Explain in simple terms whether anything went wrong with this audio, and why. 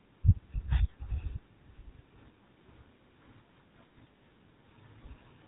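The whole clip went through the GSM full-rate codec, an old phone format. Nothing above 3.8 kHz survives. The speech sounds plainly buzzy and rough.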